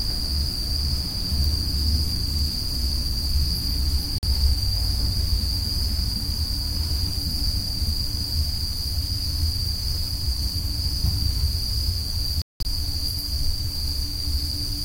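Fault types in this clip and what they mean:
Bluetooth dropout: sharp-edged silences near 4.18 s (46 ms) and 12.42 to 12.65 s, likely lost wireless packets; the sound resumes further along, unlike a pause.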